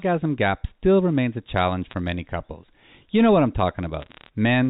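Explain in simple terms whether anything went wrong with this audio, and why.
Yes, there are two bursts of bit errors on a digital phone line: at 1.85 to 1.94 s, between "still remains a challenge" and "many couples", and again at 4.0 to 4.29 s. Flipped bits each corrupt single samples, giving sharp ticks and crackle over the speech.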